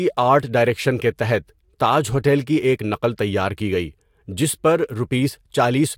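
A speech recording with nothing technically wrong in it, so there are no faults to time or trace to a cause.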